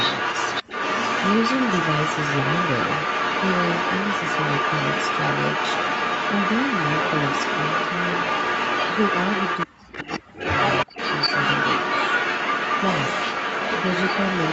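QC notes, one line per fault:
0.0–9.67 s, 9.92–10.2 s and 10.36–14.52 s: echo leak. A copy of the speech returns 328 ms late. It is about as loud as the speech at first, a little quieter around 10 s, then a little louder to the end. Likely a far-end echo canceller missed loudspeaker pickup.
0.63–0.69 s, 9.66–10.42 s and 10.85–11.0 s: speech suppressed in double talk. The speech dips sharply, nearly cutting out in the first two, less deeply in the third. Likely the echo canceller mistook overlapping talk for echo and turned everything down.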